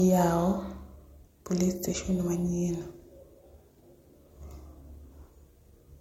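Low-bitrate audio saved at a high bitrate, throughout: the speech stops dead above 16.6 kHz, likely an earlier low-bitrate MP3 cut-off the re-encode cannot restore.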